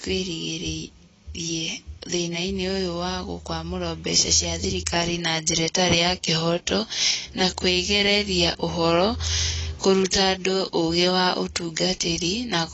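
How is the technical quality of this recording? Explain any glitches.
The speech is noticeably degraded throughout by AAC compression. Nothing reaches above 7.9 kHz, and the likely cause is AAC-LC coding at a low bitrate, around 24 kbps. The coder spends too few bits on each frame's spectrum, so it cuts the top band and quantises the rest coarsely. The result is dull and smeared, with warbling fizz on sibilants. That swirling texture sets it apart from a plain low-pass filter, which would only dull the sound.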